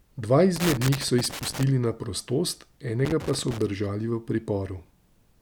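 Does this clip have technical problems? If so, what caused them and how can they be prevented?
Yes. Loose connector crackle appears from 0.56 to 1.63 s and from 3.05 to 3.62 s. A worn or dirty contact is making and breaking as it shifts. That chops the speech into irregular, scratchy bursts. Clean and reseat the connectors, and replace worn cables.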